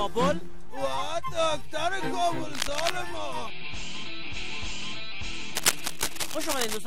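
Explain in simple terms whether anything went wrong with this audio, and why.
DC offset runs through the whole clip: the waveform sits shifted off its centre line, so you can't hear it, but it wastes loudness room and adds steady energy at the very lowest frequencies.

Cable scratch noise appears from 2.53 to 2.90 s and again from 5.55 to 6.77 s as a harsh scratching, rustling burst about as loud as the sound itself, likely from a worn cable or connector being moved.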